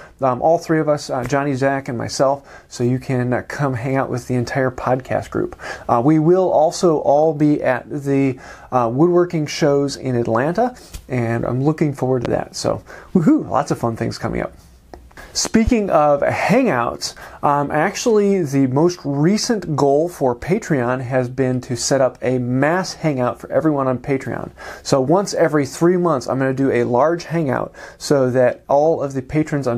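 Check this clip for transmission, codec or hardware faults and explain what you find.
Two loud pops, at 12.25 to 12.28 s (single) and 15.45 to 15.70 s (a double), likely from a sudden voltage pulse, jump about 10 dB above the sound, which continues beneath.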